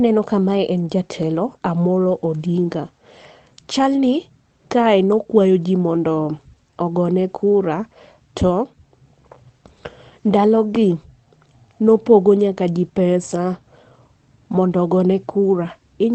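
No technical faults can be heard anywhere in this speech.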